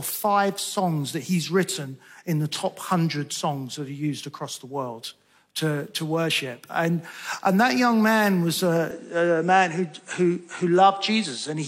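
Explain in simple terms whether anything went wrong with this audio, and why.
From about 8.91 s to the end, the sound turns duller, with nothing above roughly 9.3 kHz and a very faint new background noise, but no gap and no jump in loudness. That's most likely an input switched to a poorer device mid-recording.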